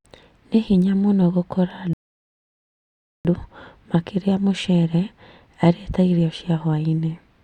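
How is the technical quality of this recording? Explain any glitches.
The recording has one glitch, a rebuffering stall. At 1.93 s, just after "hinya mũno gũkora", playback drops to silence until 3.25 s, then continues from exactly the same point. The player exhausted its downloaded audio and waited for more data. Nothing is skipped, but about 1.32 s of dead air is inserted.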